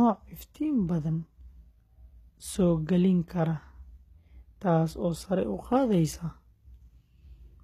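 A speech clip likely passed through HE-AAC compression at a low rate, around 20 kbps by the sound of it, so its treble is rebuilt by band replication. Throughout, nothing sounds above 14.9 kHz, and s sounds come out gritty and metallic.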